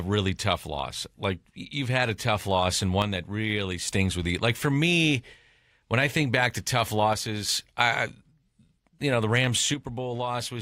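Three times the speech level falls abruptly by about 6 dB: from 3.02 to 3.88 s after "a tough loss and", returning before "with you"; from 7.13 to 7.49 s after "think back to tough"; and from 9.74 s to the end. This is most likely one channel dropping out, halving whatever both channels shared once summed to mono. Unlike a fade or gain ride, each step is instant and exactly 6 dB.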